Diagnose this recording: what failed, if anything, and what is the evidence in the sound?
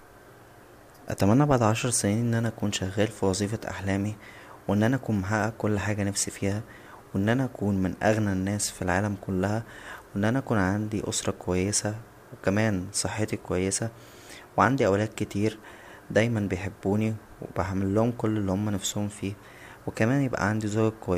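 Nothing in the signal chain failed; the speech signal holds steady throughout, with no dropouts, discontinuities, distortion or timing disturbances audible at any point.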